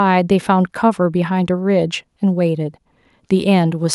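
Speech recording with no audible technical faults anywhere.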